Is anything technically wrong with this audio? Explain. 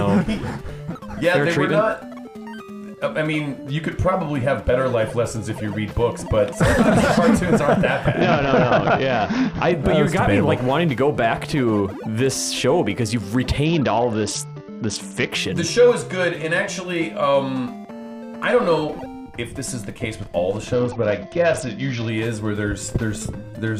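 Yes, there are three short Bluetooth SBC bit pool drops, at 8.21–9.72 s, 13.65–15.32 s and 20.73–22.09 s. Each time the treble goes dull and a gritty grain creeps in. That fits the link squeezing SBC from a bit pool of 28 down to 8, around 72 kbps, starving the top sub-bands and coarsely quantising the rest until the rate recovers.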